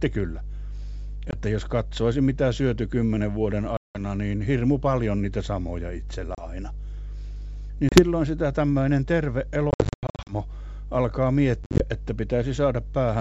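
A ground loop or a nearby transformer couples 50 Hz mains hum into the signal from start to end, a steady low tone roughly 10 dB below the speech. Packet loss on the ADPCM call then cuts hard-edged silent holes at 1.31 s, 3.77 s (about 180 ms), 6.35 s, 7.89 s, 9.71 to 10.34 s (scattered gaps, longest 90 ms) and 11.64 to 11.84 s. After each hole the decoder's predictor is out of step, so the speech returns slightly distorted before settling.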